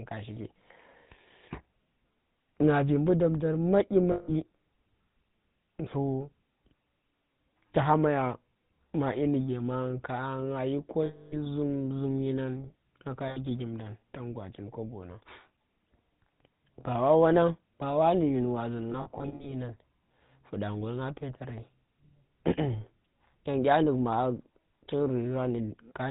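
Throughout the clip the speech carries the buzzy, gravelly texture of the GSM full-rate codec, and the damage is plainly audible. The codec reduces the voice to a vocal-tract filter excited by a sparse, regularly spaced pulse train, so fine detail is replaced by a coarse rasp. Nothing survives above 4 kHz, which dulls the top end. The character fits the 13 kbps full-rate coder.

Lost GSM frames appear at 4.12 s for 160 ms, at 11.06 s for 260 ms, and at 13.28 s for 80 ms. At each dropout the decoder keeps repeating the last good frame, so the sound hangs as a rough, metallic ring instead of cutting off. The 260 ms loss is the longest of these. From 18.92 s, 220 ms of losses are scattered across about 480 ms, none longer than about 70 ms.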